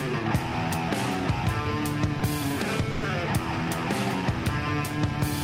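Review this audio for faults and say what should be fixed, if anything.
A short concealed packet loss occurs between 2.19 and 2.21 s. About 10 ms of audio never reached the decoder in time, so the receiver invented roughly 10 ms by extending the sound just before the hole and then crossfaded back into the real signal. The result is a brief smear at that spot, where a very short detail of the sound may simply be missing. A slightly deeper jitter buffer would let late packets arrive before playout and prevent this.

A burst of packet loss runs from 2.91 to 3.03 s. About 110 ms of consecutive audio was lost or arrived too late to play, and the receiver bridged the whole gap with synthesized continuation instead of dropping to silence. It prolonged the last sound and let it fade, so listeners hear a held buzz or thinning hiss. The audio then resumes further along, with that 110 ms of real content gone. 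Forward error correction or redundant packet encoding on the sending side would let the receiver rebuild a run of losses this long.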